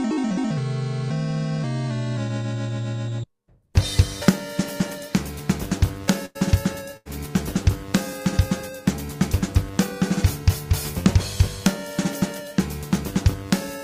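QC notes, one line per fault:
6.25–6.37 s and 6.97–7.07 s, burst of packet loss: consecutive packets went missing, so the receiver stretched and faded the preceding sound for 94 and 86 ms, then resumed with 100 and 80 ms absent.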